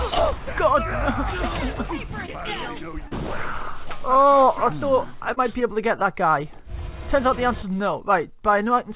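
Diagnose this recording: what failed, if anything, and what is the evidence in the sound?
Short concealed packet loss on the network side of the call, heard as brief smears or wobbles at 2.26, 3.08 and 5.33 s. Roughly 20, 40 and 40 ms of audio arrived too late, and the receiver bridged each gap by extending the preceding sound before crossfading back. On a spectrogram, each spot shows smeared, repeated harmonics or flat noise where detail should be. The waveform shows a suspiciously periodic stretch. All of this sits inside a band that stops at 4 kHz, typical of a narrowband telephone codec.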